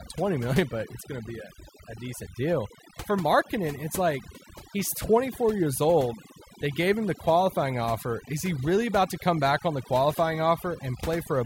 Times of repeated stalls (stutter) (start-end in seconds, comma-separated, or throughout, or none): none